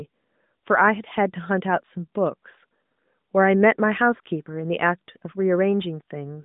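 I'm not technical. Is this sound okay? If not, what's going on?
Yes, nothing is wrong here.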